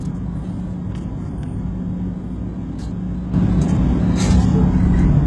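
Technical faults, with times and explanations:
Throughout: heavy HE-AAC compression likely; rebuilt, gritty treble stops near 11.4 kHz, with a smeared, blocky spectrogram above the crossover, fitting a bitrate around 12 kbps.
3.34 to 5.26 s: sudden gain jump; sound and background noise rise together by about 9 dB, shown as an abrupt waveform step, likely an unramped gain change.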